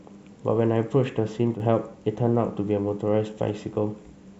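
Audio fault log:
1.54 to 1.60 s, one channel drops out: the speech dips abruptly by about 6 dB for under 60 ms, then snaps back. Most likely one stereo side went briefly silent, so the mono sum kept only half of the shared signal.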